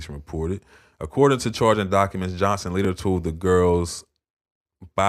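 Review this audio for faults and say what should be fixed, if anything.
At 2.85 s the speech jumps forward slightly, with a very short piece, around a millisecond and a half, missing. This is likely a dropped buffer (overrun): the capture side failed to read its samples before they were overwritten, so the audio either side is butted together. Unlike a dropout, no silent gap is left; the signal simply skips. To prevent it, give the recording thread higher priority or a larger buffer.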